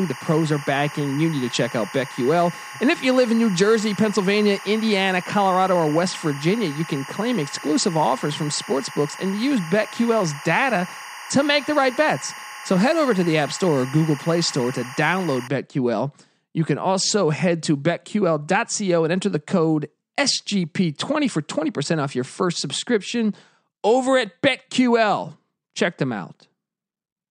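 Timecode bleed runs from the start to 15.48 s: linear timecode leaking in from an adjacent track or cable, its square wave flipping between tones near 1 and 2 kHz at 23.976 frames per second. It sits roughly 15 dB under the speech as a steady chirping warble.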